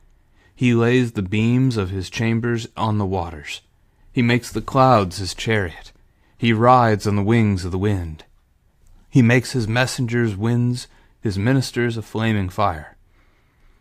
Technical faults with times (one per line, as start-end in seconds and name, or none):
none